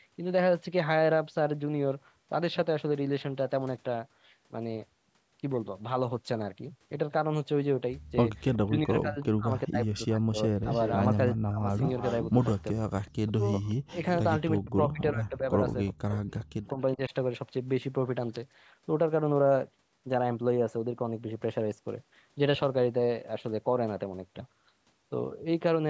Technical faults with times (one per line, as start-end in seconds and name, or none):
8.54-9.25 echo leak
8.65-11.66 speech suppressed in double talk
10.71-14.60 echo leak
12.73-13.68 speech suppressed in double talk
14.61-17.13 speech suppressed in double talk
15.86-16.73 echo leak